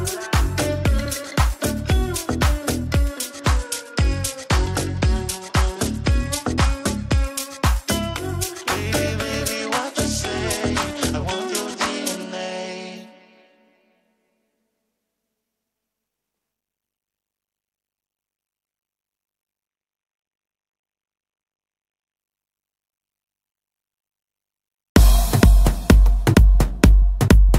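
Three times the treble goes dull and a gritty noise creeps in, from 3.29 to 7.26 s, 9.56 to 12.97 s, and 19.67 to 22.17 s. That's a Bluetooth SBC bit pool drop, fitting a fall from 28 to 11 (about 90 kbps), which starves and coarsens the upper sub-bands.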